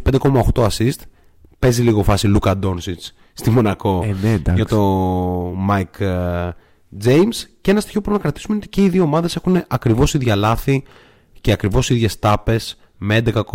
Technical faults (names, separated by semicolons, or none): hard clipping